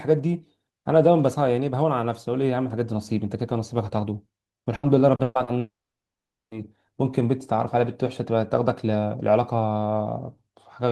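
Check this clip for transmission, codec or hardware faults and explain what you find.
Two transmission faults sit back to back in the middle of this speech clip.

From 4.75 to 5.50 s the speech turns choppy, with pieces dropping out. This is repeated packet loss (robotic sound). Four gaps in quick succession, the longest about 120 ms, take out 280 ms in total. Each hole is papered over by stretching the last received sound, so roughly 37% of that stretch is synthetic filler rather than real speech.

Then, from 5.59 to 6.54 s, the sound smears into a brief fading buzz or hiss and falls to near silence for about 810 ms before speech resumes, with around 920 ms never recovered. The likely cause is a long network dropout: nothing arrived for almost a second, the receiver extended the final fragment until it decayed away, and playback picked up later without the lost portion.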